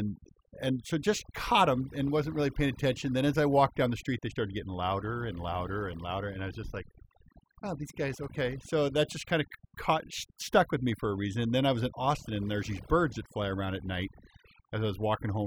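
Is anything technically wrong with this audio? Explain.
Yes. Overdone noise removal runs throughout this speech: bands near the noise estimate are cut away, leaving twinkling specks in near-silent gaps, unlike plain hiss or low-bitrate smearing.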